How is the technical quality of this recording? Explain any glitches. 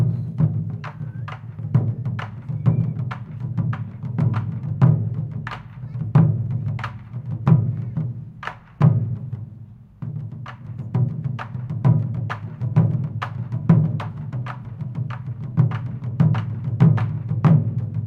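The technical quality of this recording is good, with no glitches to explain.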